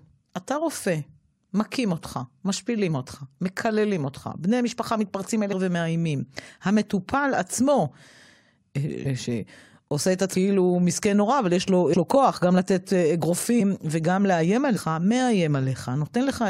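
Compressed frames skipped at 5.52, 9.05, 11.92 and 14.76 s: runs of frames, which fit a 23.2 ms frame length, never reach playback, so the speech jumps ahead by about half a second, a fifth of a second, then roughly a tenth twice.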